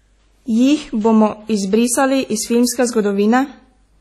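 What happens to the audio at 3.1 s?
At 3.1 s you're hearing the same likely WMA compression that runs through the whole clip: ringing, washy speech with breathing hiss, nothing above 13.5 kHz, which fits a low bitrate around 32 kbps.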